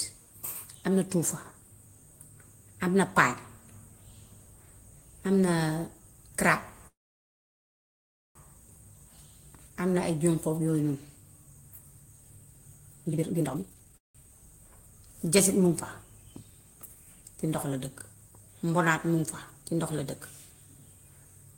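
A call audio freeze runs from 6.87 to 8.37 s. The likely cause is packets being held up in transit, which let the jitter buffer run dry. The receiver stretches the last sound briefly, then goes quiet for about 1.42 of the 1.48 s. When audio resumes it picks up exactly where it stopped, so nothing is lost, but the stream now sits about 1.48 s later.

A jitter buffer speed-up follows from 13.04 to 13.97 s. The receiver trims many short pitch-period slices in a row to work off excess buffered delay, removing about a second in all. The speech plays at 192% of normal rate with its pitch unchanged, so it sounds rushed and compressed. Right after, from 13.97 to 14.16 s, a second call audio freeze occurs. This gap is also likely caused by the jitter buffer running dry. It is 177 ms long, mostly silent, with nothing missing and a small added delay.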